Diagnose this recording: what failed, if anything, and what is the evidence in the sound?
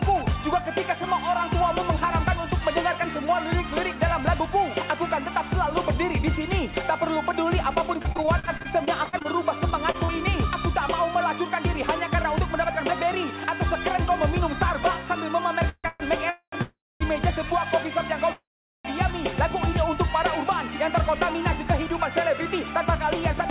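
From 8.02 to 10.10 s the sound turns choppy, with 18 brief holes, none longer than 44 ms, covering about a fifth of that stretch. This is repeated packet loss (robotic sound) on the network: each missing packet is papered over by extending the previous sound, all within a narrowband path that stops at 4 kHz, which fits G.711 A-law at 64 kbps.

Five stalls occur, at 15.69–15.86, 15.88–16.02, 16.30–16.54, 16.62–17.02 and 18.32–18.87 s. Each is a fading buzz or hiss that, in the longer ones, sinks into up to 0.42 s of silence before the sound picks up exactly where it left off. These are call audio freezes, likely from packets held up in the network until the jitter buffer ran dry, adding 0.12 to 0.52 s of delay each time.

From 20.51 to 23.44 s the audio runs about 4% fast at unchanged pitch. This is a jitter buffer speed-up: to work off excess buffered delay, the receiver snips out many tiny pitch-period slices, roughly 150 ms in total.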